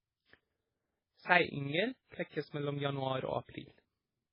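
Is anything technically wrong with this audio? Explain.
Yes, two faults run through the whole speech clip.

Overlap-add ripple: frames were rejoined with an overlap that doesn't sum evenly, so the level dips by about 6 dB roughly 20 times a second, a rough, fluttering tremolo. The waveform envelope shows regular scalloping, and the spectrogram shows fine vertical striping.

Heavy damage, likely from low-bitrate MP3 compression (the sound points to around 16 kbps): nothing survives above 5.3 kHz, a flat ceiling on the spectrogram, and weak frequency lines blink on and off as patchy holes. The result is watery, swirly speech with smeared attacks.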